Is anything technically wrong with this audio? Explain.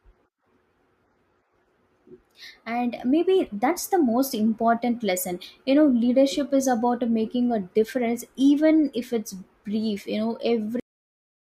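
Yes. The clip has a cut-off end at 10.80 s, where the last buffers of audio were never written out. The speech stops mid-sound instead of finishing. It falls straight to digital silence with no natural decay, and that silence lasts the final 0.65 s.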